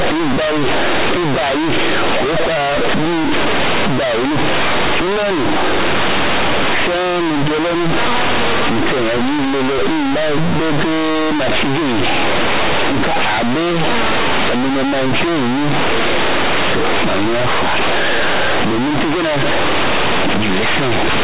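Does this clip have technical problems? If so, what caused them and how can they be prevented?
Yes. The speech is damaged throughout by companded audio read as linear: mu-law bytes play as plain 8-bit samples with no expansion, so each sign change swings the output across about half its range and quiet passages become as large as loud ones. It sounds like harsh, buzzy distortion with strong noise in the pauses. The waveform stays large even in gaps, and a spectrogram shows broadband noise filling what should be silence. Decoding mu-law through a proper expander before playback prevents it.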